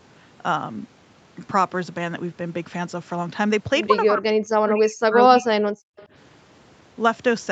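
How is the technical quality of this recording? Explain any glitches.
The recording has two clear glitches, both typical of a speakerphone call: the voice is pushed down during overlapping talk, and a faint echo slips through shortly afterwards. The speech band stops at about 8 kHz, which fits an Opus call path.

Speech suppressed in double talk occurs at 4.06–4.23 s, a brief dip of about 15 dB, and again at 4.52–5.66 s, where the level falls by about 40 dB for roughly a second. This likely happened because the far side spoke at the same time and the echo canceller, unable to tell this voice from loudspeaker echo, attenuated everything. The voice sinks and nearly vanishes. On a waveform the envelope collapses, and a spectrogram shows the energy fading out across the band.

An echo leak appears at 5.97–6.07 s. It is a faint copy of the voice arriving 228 ms late, about 30 dB below the speech. 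It is likely residual loudspeaker pickup that the loudspeaker side's echo canceller failed to remove. It sounds like a ghostly scrap trailing the talker. A spectrogram shows weak, displaced harmonics echoing earlier patterns.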